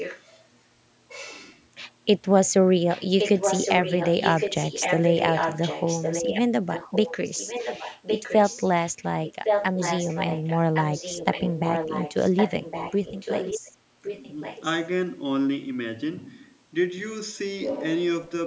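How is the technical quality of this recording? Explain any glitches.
The speech carries an echo leak: a fainter copy of the talker returns about 1.11 s late at 0.0–0.22, 2.89–6.41, 6.7–7.15, 7.35–9.05, 9.24–13.72 and 14.02–14.65 s. The likely cause is a loudspeaker on one side of the call whose echo canceller let some of the microphone pickup through. The copy sits somewhat below the direct speech and is strongest during 2.89–6.41 and 9.24–13.72 s. On a spectrogram it shows as duplicate harmonic traces trailing each phrase by just over a second.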